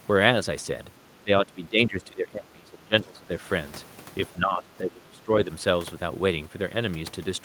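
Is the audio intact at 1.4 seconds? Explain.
No. From 1.24 to 3.33 s the speech sinks, dropping by roughly 15 dB at its deepest. This is speech suppressed in double talk, likely because an echo canceller, unable to separate this talker from loudspeaker echo while both sides spoke, turned both down.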